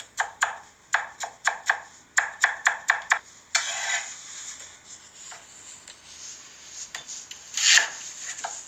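A skip ahead at 3.17 s drops about 0.7 s of sound. Audio was dropped while later audio waited, so playback jumps forward with no gap.

Jitter buffer speed-up follows at 3.26–3.50 s at 116% speed and again at 4.76–6.01 s at 106%. Short pitch-period slices were cut repeatedly, so the sound runs hurried at unchanged pitch.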